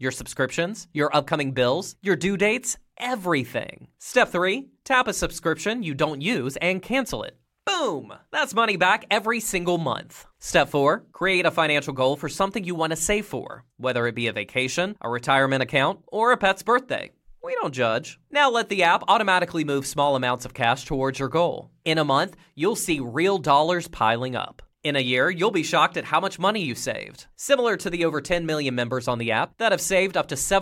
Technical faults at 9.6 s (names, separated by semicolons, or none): none